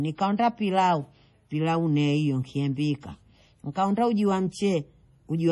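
Throughout the speech, nothing above 11.4 kHz and heavy watery, swirling artefacts on sibilants, likely from MP3 compression at a low bitrate, consistent with roughly 32 kbps.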